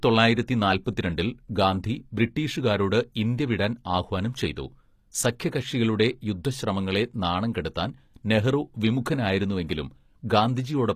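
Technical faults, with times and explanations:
Throughout, HE-AAC compression: the speech has plainly audible codec damage, with a treble that sounds present but synthetic, so sibilants come out gritty and lispy, and nothing reaches above 15 kHz. This is likely spectral band replication at work: only the lower band is truly coded, and the upper band is patched in from copied lower content under a coarse envelope, so its harmonics fail to line up. The degree of damage fits a bitrate around 24 kbps.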